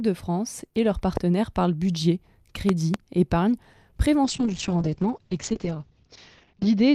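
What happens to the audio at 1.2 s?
A single loud pop hits the audio from 1.17 to 1.19 s, standing well above the surrounding level. It is likely a sudden voltage step, from a plug, switch, static or driver glitch, added to the signal. The sound carries on underneath the sharp thump.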